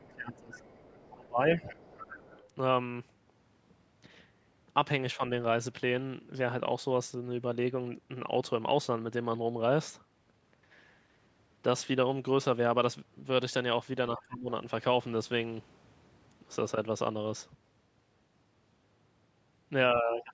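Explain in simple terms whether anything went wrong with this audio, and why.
A couple of things slip here, both typical of a call where two people talk at once. The first is speech suppressed in double talk: from 0.0 to 1.63 s the voice sinks deep, and it dips again briefly around 5.16 to 5.22 s, at 14.17 to 14.5 s, and from 19.94 s to the end. That's likely the echo canceller turning everything down when it couldn't tell the talker from the loudspeaker.

The second is the other side's voice leaking through. A faint second voice sits underneath from 0.56 to 2.47 s, with tiny scraps at 14.18 to 14.22 s and 20.2 to 20.24 s. The canceller likely didn't fully scrub the speaker sound out of the microphone.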